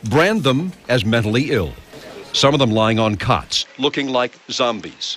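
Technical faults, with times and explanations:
3.62 to 5.17 s, input switched to a poorer device: at 3.62 s the sound abruptly narrows, with nothing above 7.8 kHz, so it turns duller. It also gets a little quieter and picks up a faint new background noise sitting well below the signal. There is no gap at the change. This is likely the system moving its input to a lower-quality microphone or a headset's call profile, which has a narrower band and its own level and noise.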